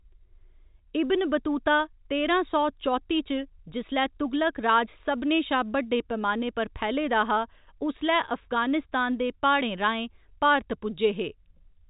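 Listening through this speech recording, heard through a telephone-band G.711 path that cuts off just under 4 kHz, nothing stood out.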